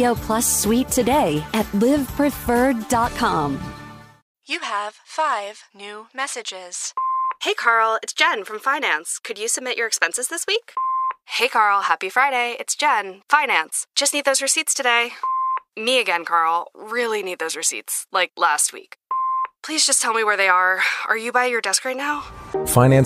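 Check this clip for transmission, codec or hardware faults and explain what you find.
No transmission, codec or hardware fault is audible anywhere in the clip.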